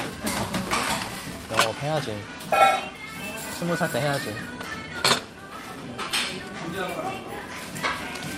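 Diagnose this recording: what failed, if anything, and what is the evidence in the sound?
The sender and receiver clocks disagree, so this is clock drift between sender and receiver at the network jitter buffer. The sender seems to run around 4 percent fast, so audio keeps arriving quicker than it's played out and the buffer keeps filling, all through these sounds.

To keep up, the receiver makes repeated timing corrections from about 0.11 s right to the end at 8.4 s, trimming short pieces so playback runs at 104 percent. The cuts all go the same way but land unevenly.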